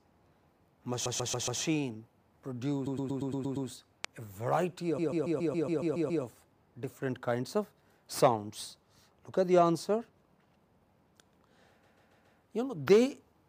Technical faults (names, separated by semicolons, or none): repeated frames; loud pop